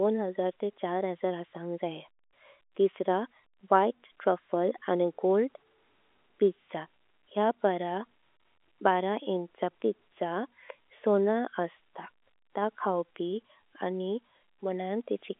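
No technical faults can be heard in the speech. It sounds like G.711 telephone coding working normally, with the band held between roughly 300 Hz and 3.5 kHz and any quantisation noise at most faint beneath the signal.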